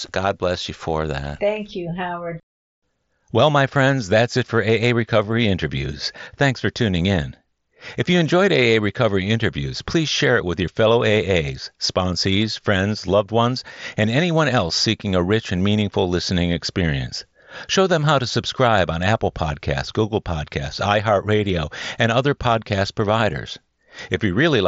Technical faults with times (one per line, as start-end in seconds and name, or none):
none